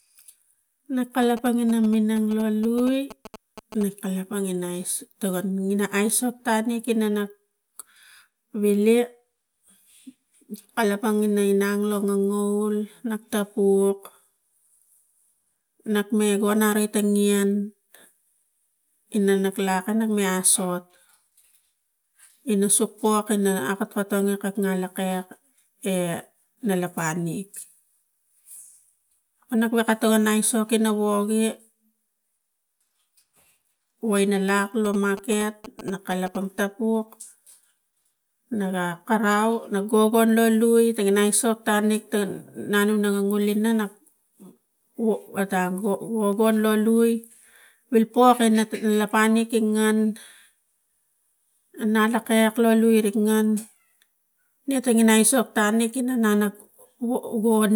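Speech carrying GSM signalling bursts at 1.22–3.83 s and 34.85–36.60 s: a galloping dit-dit-dit of short 217 Hz buzzes well below the voice, from a nearby phone's radio being rectified. Unlike steady mains hum, it comes in short groups.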